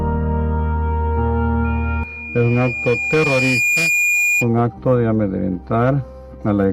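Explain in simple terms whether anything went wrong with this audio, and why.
Something did go wrong: a loudspeaker feedback squeal runs from 1.64 to 4.49 s. A microphone was picking up the loudspeaker it was feeding, so the sound went round the loop and got louder each time at one pitch, 2.4 kHz. That single tone swells over about two seconds until it is roughly as loud as the rest of the sound, then stops.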